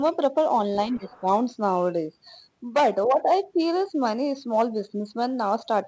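From 0.9 to 1.29 s the talker's level drops by roughly 10 dB in pieces totalling about 200 ms, likely speech suppressed in double talk by the echo canceller. Between 0.91 and 1.2 s, the faint other side's voice leaking through sits roughly 30 dB below the talker, likely residual loudspeaker echo left in the microphone.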